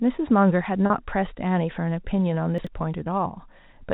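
Speech carried over a G.711 mu-law telephone path, limited to nothing above 4 kHz, shows packet loss with pitch repetition at 0.86 to 0.90 s and again at 3.04 to 3.06 s. The first gap is 40 ms and the second 20 ms, which points to one or two 20 ms packets going missing. In each case the receiver fills the hole by looping the last pitch period, so the sound briefly holds with a slightly buzzy, sustained quality before normal audio resumes. Between 2.58 and 2.67 s there is a case of chunks out of order. A block of roughly 21 ms arrives late and plays three chunks after its proper position. No audio is lost, but the sequence is scrambled, and the three abrupt joins give a short jumbled moment.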